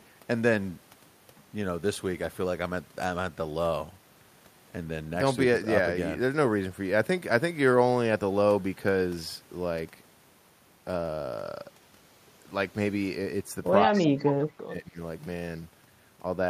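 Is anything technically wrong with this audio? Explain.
Yes. From 13.86 to 14.99 s the speech is suppressed in double talk: the level dips and breaks up for about a second in total, falling by roughly 25 dB at its deepest. Both ends were likely talking at once, and the echo canceller turned down this talker's voice along with the echo. Unlike a network dropout, the gaps follow the overlap rather than cutting cleanly.

Inside that stretch, at 13.98 to 14.05 s and 14.22 to 14.47 s, there is echo leak: a copy of the voice arrives 168 ms late, roughly 10 to 15 dB below the speech. A far-end loudspeaker's echo likely slipped past its canceller. The fixed delay marks it as returned echo, not room reverberation.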